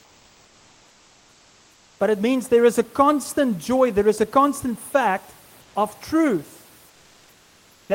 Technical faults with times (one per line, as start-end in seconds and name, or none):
0.00-1.99 comfort noise in place of the background
5.61-5.75 comfort noise in place of the background
6.89-7.89 comfort noise in place of the background